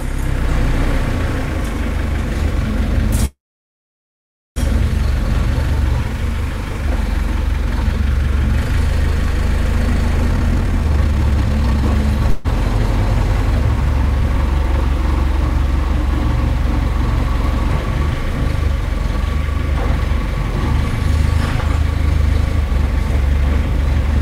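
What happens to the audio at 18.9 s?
Nothing goes wrong at 18.9 s; the sound carries on intact through that moment, with no dropout, click, distortion or other fault to be heard.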